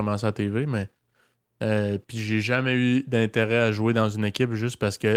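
A speech recording, with nothing technically wrong with it.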